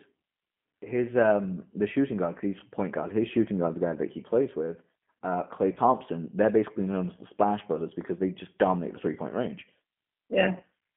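G.729 codec damage runs throughout. The speech is rebuilt from a vocal tract filter, a pitch predictor and a few pulses per frame, which fits an 8 kbit/s G.729A stream. The line band is 150 Hz to 3.4 kHz, and the voice sounds plainly rough and synthetic.

VoIP packet loss concealed by the speech codec occurs at 5.74–5.79 s and again at 10.58–10.63 s. Each dropout of about 20 ms fits a single lost packet. The decoder stretches its last pitch and filter into a fading buzzy tone or coloured noise, and the voice stays weakened briefly afterwards.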